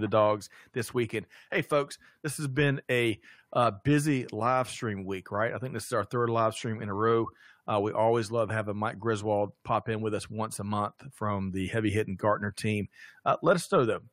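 A speech recording with nothing technically wrong to point to at any moment.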